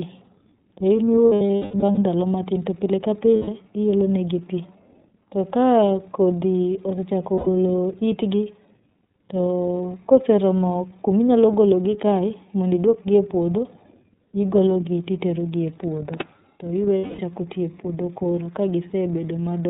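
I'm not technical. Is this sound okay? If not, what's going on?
No, not quite. The whole recording has gone through the iLBC codec, a phone-call codec that drops everything above 4 kHz and squeezes each 30 ms chunk on its own. That's why the speech sounds muffled, a bit rough and slightly robotic throughout.

There are also lost iLBC frames, where chunks of audio went missing in transit and the decoder filled the holes by repeating the last bit of sound with some noise. You'll hear brief held, buzzy smears at 1.27 to 1.98 s (the worst, with gaps scattered through it and the longest around a fifth of a second), 3.36 to 3.48 s, 7.35 to 7.48 s and 16.98 to 17.20 s.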